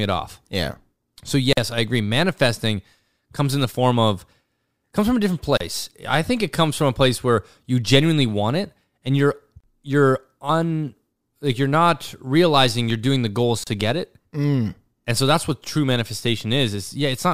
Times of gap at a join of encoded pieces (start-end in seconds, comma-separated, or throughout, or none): 1.53-1.57, 5.57-5.60, 9.60-9.64, 13.64-13.67